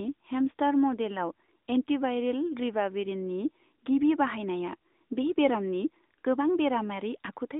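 Throughout the speech, the AMR narrowband mobile codec confines the sound to 200 Hz to 3.7 kHz and rebuilds each 20 ms frame from a vocal-tract model. Unlike plain band-limiting, this adds an audible buzzy, synthetic edge that fits a mid-rate mode near 10.2 kbps.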